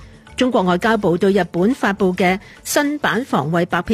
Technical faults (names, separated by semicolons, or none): sample clock jitter